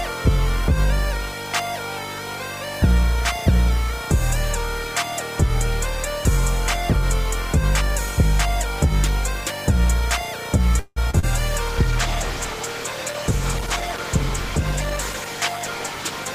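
A call audio freeze runs from 10.79 to 10.98 s. The sound stalls and the last moment is drawn out as a fading buzz or hiss for about 170 ms, ending in a brief 10 ms of silence before the audio resumes exactly where it stopped. The likely cause is packets held up in transit so the jitter buffer ran dry. Because nothing is lost, the stall simply inserts a gap and leaves everything after it running about 170 ms later.

Short concealed packet loss follows twice, at 11.10 to 11.15 s and 11.19 to 11.25 s. Each time a few hundredths of a second failed to reach the decoder in time: 20 ms in the first case and 40 ms in the second. The receiver extended the preceding sound to bridge the hole, for 27 ms and then 35 ms, before blending back into the real signal. These are heard as quick smears or wobbles in close succession, and the real content in those spans is gone.

A call bitrate drop begins at 11.69 s and lasts to the end, about 4.7 s. 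The bandwidth estimate fell, so the encoder went from 32 to 12 kbps. With so few bits Opus codes far more coarsely and trims the upper frequencies, and the sound turns rough, watery or muffled, which stays for the rest of the audio.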